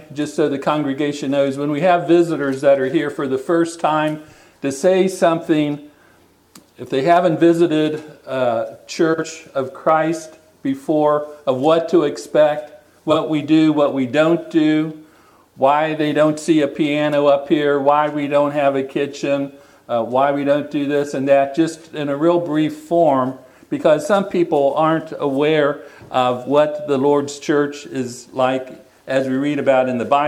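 At 9.13–9.24 s and 13.10–13.16 s, frames out of order: two adjacent blocks play swapped, giving a brief garbled flutter.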